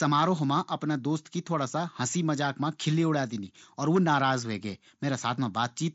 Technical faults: none

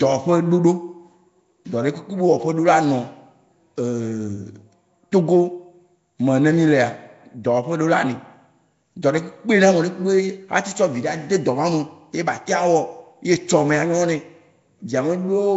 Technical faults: Nellymoser compression

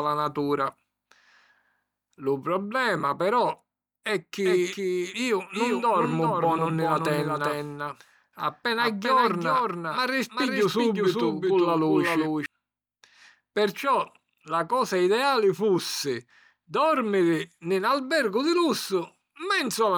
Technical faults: doubled audio track

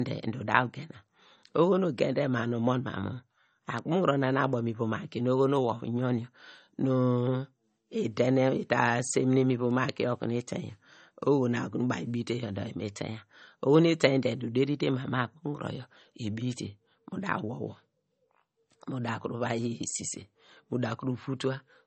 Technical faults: low-bitrate audio saved at a high bitrate

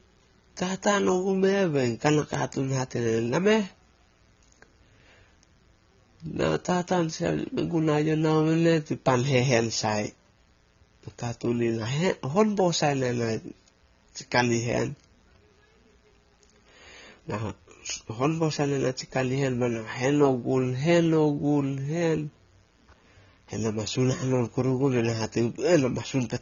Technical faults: mains buzz; AAC compression

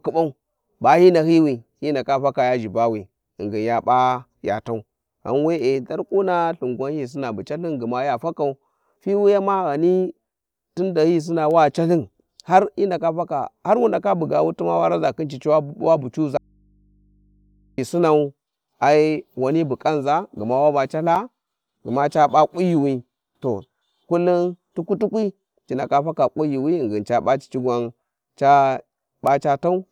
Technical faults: audio dropout to a faint residue; block of digital silence

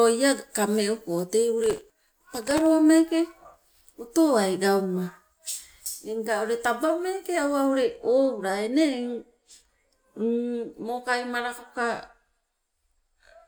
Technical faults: processor overload crackle

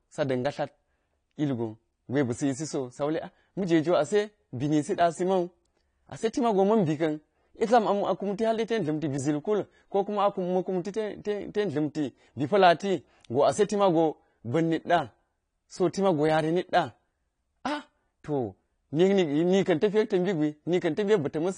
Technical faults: low-bitrate audio saved at a high bitrate

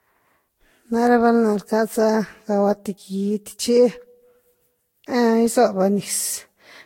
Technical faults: generation loss

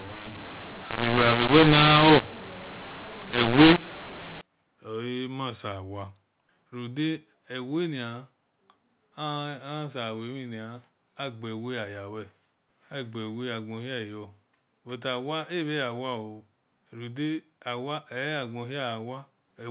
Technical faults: mu-law and A-law mixed up

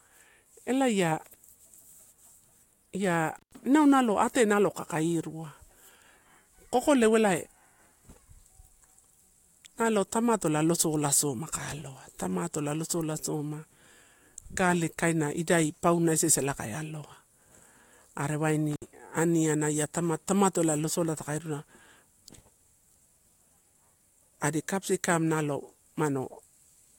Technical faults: intermittent contact

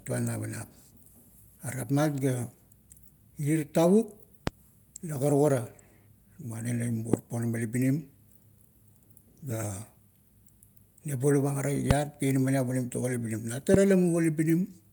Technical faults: loud pop

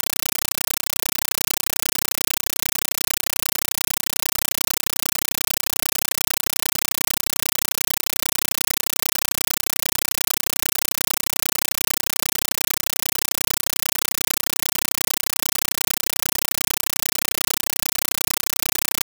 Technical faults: compressed stream played as audio

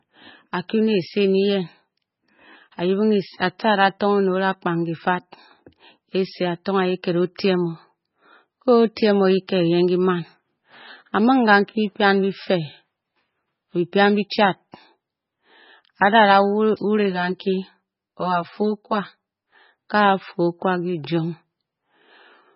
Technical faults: MP3 compression; channel delay (comb filtering)

